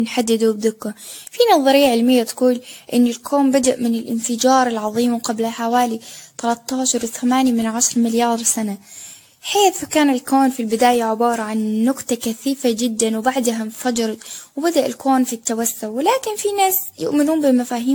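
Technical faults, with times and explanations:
Throughout, generation loss: the speech sounds swirly, smeared and hollow, with blurred attacks and accumulated noise, beyond what a single encode at this quality would produce. The likely cause is around ten successive lossy encodes, each requantising on a shifted frame grid so errors accumulate. The character points to AAC-LC near 96 kbit/s. A spectrogram shows nothing above 18.6 kHz, patchy spectral holes and smeared onsets.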